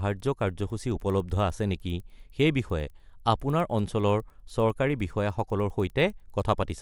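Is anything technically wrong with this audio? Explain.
Yes. Throughout the speech, the resampler restarted on every block. Each 100 ms block was converted from 24 kHz to 48 kHz in isolation, so its edges lacked real neighbouring samples. This leaves a faint tick ten times a second while signal is present. On a spectrogram it appears as thin vertical lines every 100 ms, and the waveform shows small steps at those boundaries.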